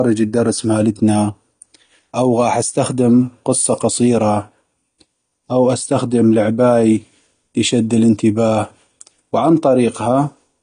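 From start to finish the speech sounds dull and smeared, with nothing above about 9.7 kHz, and there's a warbly, fizzy edge on sibilants and held vowels. That's likely AAC compression, probably AAC-LC at a low rate, something like 32 kbps. To save bits, the encoder pulled the cut-off down and thinned out the spectrum. The damage is plainly audible the whole way through.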